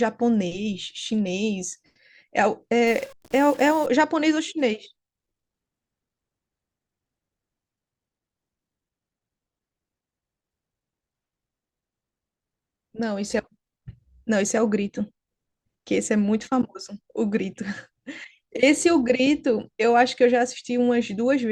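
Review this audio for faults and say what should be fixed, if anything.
From 2.87 to 3.86 s a stuck bit likely shifts about half the samples by a fixed step near -40 dBFS. The speech turns harsh and buzzy, with square jumps on the waveform and broadband haze on the spectrogram. Check the converter and its data lines for a broken or shorted connection, and confirm the fix by looking for a clean noise floor in pauses.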